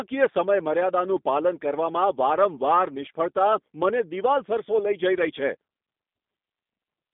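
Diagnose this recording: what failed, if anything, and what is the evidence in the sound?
Codec stage: throughout, the speech is confined to a 200 Hz to 3.6 kHz line band and has a rough, synthetic edge typical of a G.729 codec at what sounds like 8 kbit/s, unlike a clean band-limit filter.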